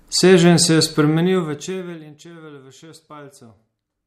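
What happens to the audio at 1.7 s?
At 1.7 s the sound is in the middle of zipper noise, which runs from 1.08 to 2.2 s while the level falls by roughly 25 dB. The gain is lowered in small unsmoothed steps, about 200 a second, and each jump leaves a tiny click, producing a fine buzzy ticking on top of the sound as it fades. A waveform shows a staircase envelope. A spectrogram shows evenly spaced faint vertical lines through that span.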